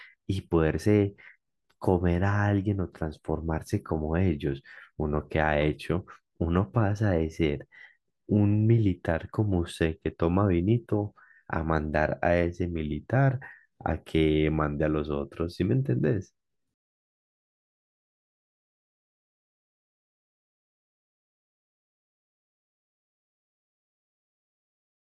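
No technical faults occur at any point in the speech, so there is nothing to describe in time order.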